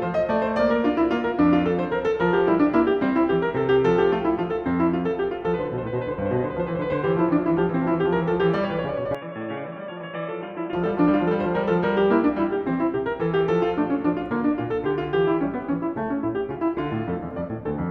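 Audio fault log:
9.15–10.73 s, input switched to a poorer device: with no gap, the music turns dull and boxy, loses everything above 3.8 kHz, drops about 10 dB and gains a faint new noise floor some 55 dB down, likely a changeover to a narrower-band microphone.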